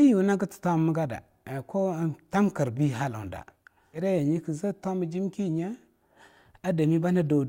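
At 3.93 s the speech lurches forward with a brief blip lasting about 0.06 s, as if a stretch of talk has vanished. This is likely a stream segment skipped: one chunk failed to load and the player carried on with the next.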